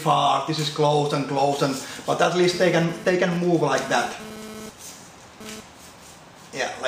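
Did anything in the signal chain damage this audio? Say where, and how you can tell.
Yes. A nearby 2G handset's radio pulses were rectified in the analogue wiring ahead of the converter, producing GSM phone buzz from 2.53 s to 5.60 s. The phone was transferring data, and its bursts repeat at 216.7 Hz. The rectified envelope becomes a hard, raspy 217 Hz buzz rich in harmonics, unrelated to the audio and about 16 dB below it. Because the phone was in data mode, the buzz comes and goes within that span.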